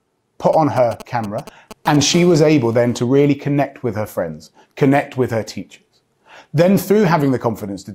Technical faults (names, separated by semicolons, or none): GSM signalling bursts; GSM phone buzz